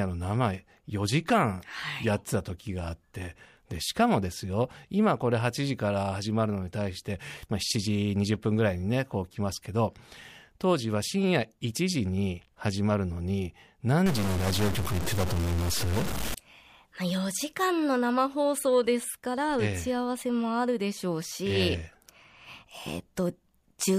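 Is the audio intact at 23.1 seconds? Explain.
Yes, the audio is intact at 23.1 seconds, with no fault present at that moment.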